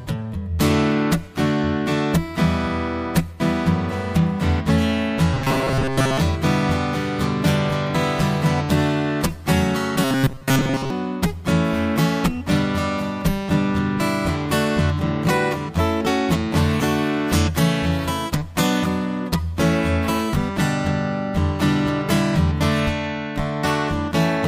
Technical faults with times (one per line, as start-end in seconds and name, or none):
5.34-6.18 robotic sound from repeated short buffers
10.04-10.90 robotic sound from repeated short buffers